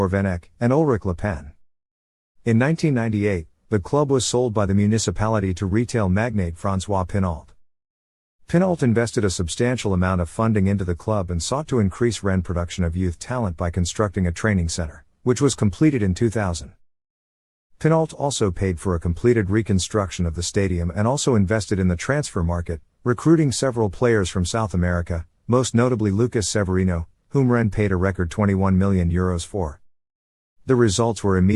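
No technical faults can be heard anywhere in this audio. Nothing interrupts or degrades the sound at any point.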